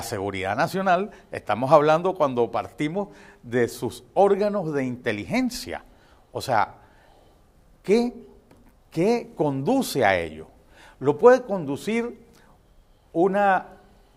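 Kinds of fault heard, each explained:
No technical faults can be heard anywhere in the signal.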